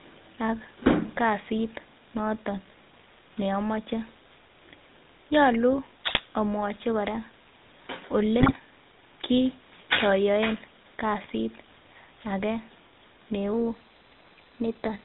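GSM full-rate codec coding runs through the whole speech clip, with a buzzy, gravelly roughness and nothing above 4 kHz, which fits a 13 kbps GSM stream with its pulse-driven vocal-tract model. GSM bit errors break in at 6.07–6.20 s, 8.40–8.57 s and 11.23–11.30 s. Corrupted filter, pitch and gain values bend the spectrum and level across several frames, producing short squawks, pops and gargling. A drift correction step from 13.53 s to the end raises speed by about 5.6% and pitch by about 95 cents, nearly a semitone, most likely from clock-matching software resetting its playback rate.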